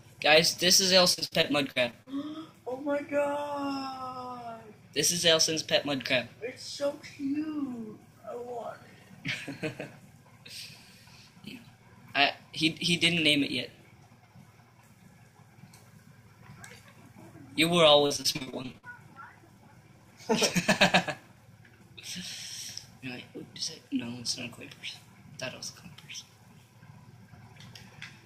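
From 1.13 to 2.08 s the sound turns choppy, with a rapid run of short holes, the longest about 60 ms, papered over by repeated fragments. This is repeated packet loss: packets kept arriving late or not at all, and each gap was filled by extending the last good sound, covering roughly a quarter of that stretch. The same stuttering returns from 18.06 to 18.85 s, denser this time, with gaps up to 47 ms and nearly 40 percent concealed.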